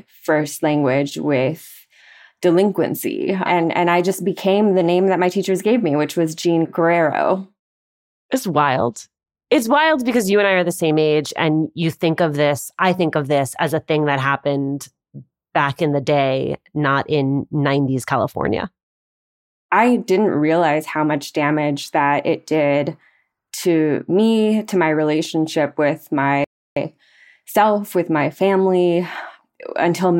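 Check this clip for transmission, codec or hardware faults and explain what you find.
There is one fault, a playback stall. From 26.44 to 26.77 s, just after "to my relationship with", the speech cuts off mid-flow for about 0.32 s before resuming. The player likely ran short of data or was briefly blocked, so output fell silent. The waveform shows a flat gap, and the spectrogram a clean vertical blank band.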